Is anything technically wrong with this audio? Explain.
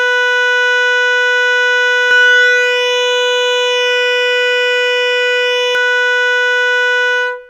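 Yes. From 2.11 s to 5.75 s the music carries a doubled audio track. A second full-band copy runs about a second behind, at roughly equal loudness. It is dry, with no decay, and starts and stops abruptly. An out-of-step edit or slower capture path is the likely cause.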